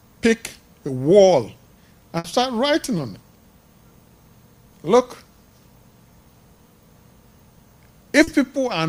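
Short concealed packet loss occurs at 0.87 s, from 2.97 to 2.99 s, and from 8.23 to 8.28 s: small stretches of this audio, 10, 10 and 40 ms long, arrived too late, so the receiver extended the preceding sound to bridge each gap, leaving a brief smear or wobble. A burst of packet loss from 2.18 to 2.25 s removes about 60 ms of audio. The receiver holds the last sound and lets it fade, so a buzz or hiss replaces the missing part before playback resumes further on.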